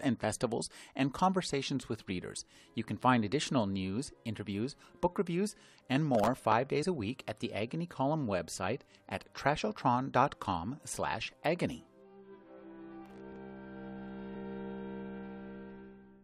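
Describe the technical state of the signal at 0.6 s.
At 0.6 s the signal is intact, with no dropout, distortion or other fault to be heard at that moment.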